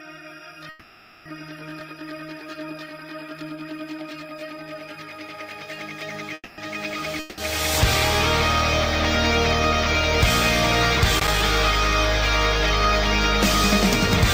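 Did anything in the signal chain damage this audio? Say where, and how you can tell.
Yes. At 0.69 to 1.27 s and again at 6.34 to 6.60 s the sound stops moving forward and the last moment carries on as a fading buzz. The second one dies to silence for its final 30 ms. Then the audio resumes exactly where it left off, with nothing skipped. That is a call audio freeze at the network and jitter-buffer stage. Delayed packets likely emptied the buffer, adding about 0.56 s and then 0.24 s of delay.

At 7.20 to 7.40 s there is a similar fading buzz, about 0.18 s long. This time, when the sound returns, it has jumped ahead, and roughly 0.18 s of material is simply gone. That is a long network dropout, again at the network stage. The audio for that stretch likely never arrived in time to be played, so the receiver concealed the gap and then skipped past the lost portion.

From 11.18 to 11.42 s there is an irregular burst of scratchy crackle, lasting about a quarter of a second. 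This is loose connector crackle in the analogue wiring. A worn or dirty contact is rapidly making and breaking the circuit, chopping the signal into fragments. Any DC offset on the line turns each make and break into a click.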